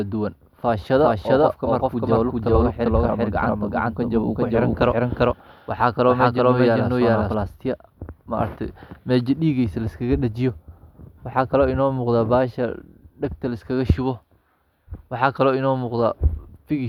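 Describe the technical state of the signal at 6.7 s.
At 6.7 s a doubled audio track is present, running from the start to 7.34 s. A full-band copy trails by roughly 0.4 s at equal level. It is likely a second capture path.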